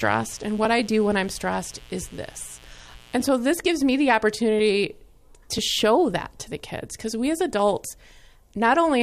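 From the start to about 3.25 s, a steady, raspy mains buzz sits under the speech, roughly 30 dB down. It's built on 60 Hz, but it isn't a clean hum. Something like a dimmer, a rectifier or a missing shield is letting sharp switching spikes into the signal twice per mains cycle. Those spikes carry a long ladder of harmonics up into the kilohertz range, which is why it sounds gritty rather than smooth.

Later there are two tiny skips, at 4.59 s and 6.60 s, each where the waveform jumps. That's overlap between stream segments. Two adjacent segments claimed the same stretch of time, and the player trimmed the overlap even though the audio wasn't actually duplicated. So about 13 and 19 milliseconds of real sound disappear at the two joins. The two-second spacing lines up with segment boundaries, which fits segments about one second long.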